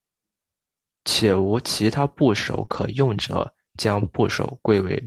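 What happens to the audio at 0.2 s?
Nothing goes wrong at 0.2 s; the speech there is intact, with no fault to be heard at that moment.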